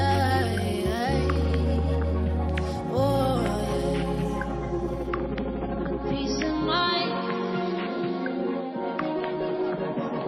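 At 5.09 s the quality drops suddenly, with no gap, and stays low to the end. This is an adaptive stream at a lower bitrate. Everything above about 5.8 kHz vanishes and codec artefacts rise, which fits a switch from 128 to 24 kbit/s MP3.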